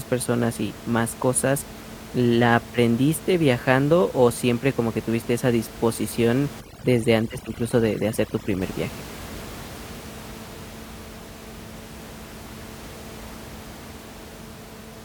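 From 6.61 to 8.62 s, overdone noise removal gates bands near the room noise floor, about 17 dB below the speech. The background drops to twinkling near-silence. A spectrogram shows isolated speckles across the gaps.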